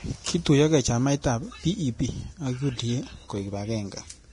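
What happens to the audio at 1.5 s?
At 1.5 s the speech has the hissy, grainy texture heard through the whole clip, with nothing above about 10.6 kHz. That's likely Vorbis compression at a low rate, around 32 kbps, with treble quantised so coarsely that detail turns into noise and consonant attacks blur.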